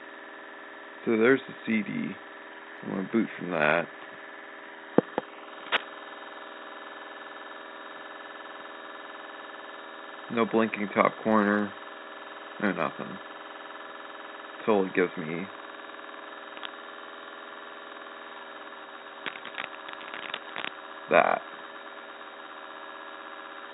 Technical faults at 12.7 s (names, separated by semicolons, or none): none